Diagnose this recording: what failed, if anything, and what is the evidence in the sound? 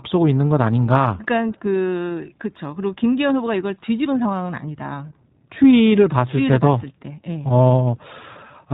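The speech has been through the iLBC codec, a narrowband VoIP coder, throughout. Everything above 4 kHz is gone, so the audio is dull and boxy, and the codec damage is plainly audible as a rough, slightly synthetic texture on the speech. The character points to the 20 ms frame mode at 15.2 kbps. Each frame's excitation is coded on its own, which trades smoothness for robustness.

At about 2.09 s there are lost iLBC frames in the network stage. The dropout fits a single 20 ms frame. With no data for that slot, the decoder filled it by repeating the last pitch cycle blended with noise, which is heard as a brief held, faintly buzzy smear. Because iLBC frames decode independently, the next frame restores clean speech almost immediately.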